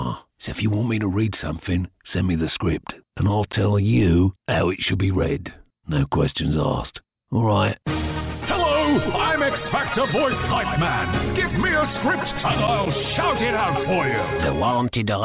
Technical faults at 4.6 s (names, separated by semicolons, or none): none